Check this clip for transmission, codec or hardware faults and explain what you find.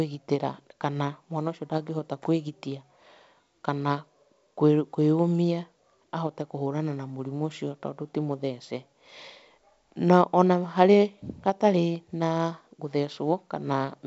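Nothing stood out on listening to this speech recording, which comes across as G.722 wideband telephone audio at 64 kbit/s with no content above about 7.7 kHz.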